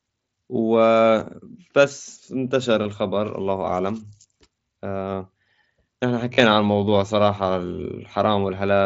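At 2.84 s there's a tiny concealed Bluetooth headset packet loss, about 15 ms of missing audio patched over by repeating a matching slice of what came just before, so it's practically invisible. From 6.34 to 6.40 s it's worse: about 45 ms lost across 60 ms, with one run near 38 ms, giving a held buzzy tone and a slight warble as the real speech comes back.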